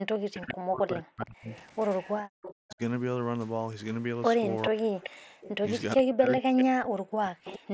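It's a speech clip that comes through a Bluetooth headset. The band tops out at 8 kHz with a touch of mSBC graininess on louder bits, and the echo canceller is clearly struggling with both sides talking. The main problem is speech suppressed in double talk from 0.0 to 1.52 s, again from 2.57 to 2.8 s, and for a long stretch from 4.7 to 7.63 s. In each of those the voice dips hard, by around 40 dB at worst. That's likely the canceller hearing the far side at the same time, failing to tell our talker apart from the loudspeaker echo, and pulling everything down together. There's also echo leak, a copy of the voice trailing about 417 ms behind, at 0.48 to 0.54 s, 1.51 to 2.74 s, 4.65 to 5.49 s and 7.45 to 7.59 s. It sits somewhere around 10 to 20 dB under the direct speech, loudest in the 4.65 s stretch. That's most likely a loudspeaker on one side of the call whose canceller let some of the playback through its microphone and sent it back. 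Finally, the background is gated by the echo canceller from 2.23 to 2.29 s: the room tone drops by about 39 dB for roughly 70 ms while the loudspeaker is active, then comes back once the canceller releases the mic.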